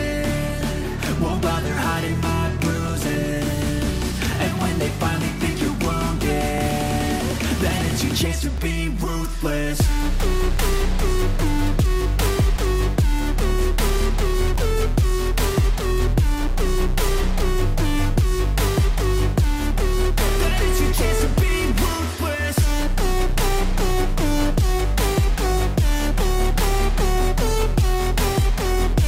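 Overlap between stream segments causes tiny skips at 2.6, 4.59, 6.58, 8.58, 10.57 and 14.56 s, where about 11 to 15 ms of sound is trimmed at 2 s segment boundaries. The regular spacing and the lack of silence separate it from a dropout.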